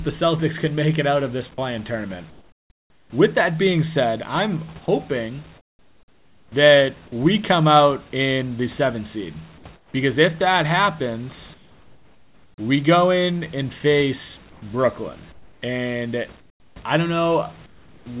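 A speech recording in which the room's background noise repeatedly turns into a flat, featureless noise whenever the talker pauses, at 2.3–3.12 s, 4.86–6.52 s, 9.76–9.94 s, 11.54–12.58 s, 14.5–16.76 s and 17.66–18.06 s. Where it can be measured, the replacement sits about 6 to 11 dB below the real background, and then the natural room sound snaps back. This is comfort noise in place of the background, likely from discontinuous transmission in the style of RFC 3389: the sender stops transmitting during silence and the receiver synthesises smooth noise in its place. At 4.86 s a tiny sliver of sound, around 10 ms, is clipped away just as that second pause begins, vanishing into the same steady noise. That is sound dropped by the voice detector, which likely judged that sound to be background and cut transmission a moment too early. Throughout, the audio has no content above 4 kHz, which fits a G.711 mu-law call path.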